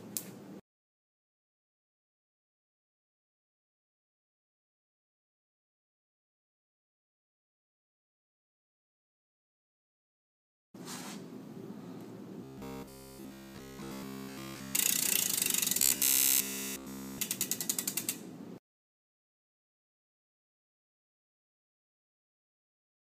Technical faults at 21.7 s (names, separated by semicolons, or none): none